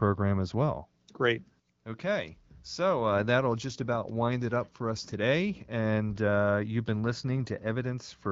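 Nothing here stands out as a fault, just speech coming through the AMR wideband (HD Voice) codec at 12.65 kbit/s the way that path normally sounds.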